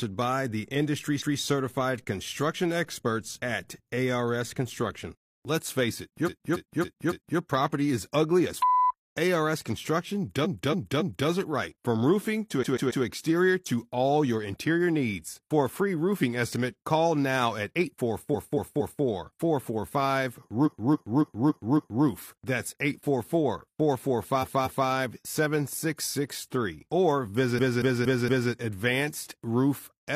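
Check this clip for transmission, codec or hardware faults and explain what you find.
The speech contains one kind of fault, repeated frames, which occurs eight times.

Repeated frames occur at 1.16, 6.23, 10.41 (just before "it right"), 12.59 (between "roofing to" and "exterior to all your"), 18.30 (after "estimate call now at"), 20.62, 24.38 and 27.54 s. In each case a block of compressed audio 139 to 279 ms long is decoded again one to five extra times. The result is an audible stutter. Each event stretches the clip by between 0.19 and 1.39 s.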